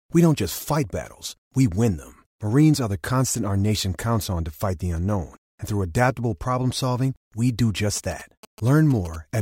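From 7.96 s to 9.16 s, GSM signalling bursts break into the speech: a galloping dit-dit-dit of short buzzes sitting around 20 dB below the voice. A nearby 2G phone is exchanging brief signalling transmissions, and the audio circuitry rectifies that RF into a pulse train repeating at about 217 Hz. On a spectrogram this shows as clustered vertical stripes with harmonics stacked at 217 Hz spacing. The waveform shows matching groups of sharp, evenly spaced spikes.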